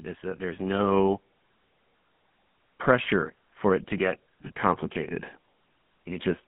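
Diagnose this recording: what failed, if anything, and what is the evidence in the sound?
The damage is at the codec stage and runs through the whole speech clip. The voice has the buzzy, gravelly roughness typical of the GSM full-rate codec, and it is plainly audible. The band is confined to roughly 150 Hz to 3.4 kHz, with nothing above. The coder models the vocal tract and excites it with a regular pulse train built from a decimated residual, which accounts for the rasp. The quality fits the 13 kbps full-rate mode.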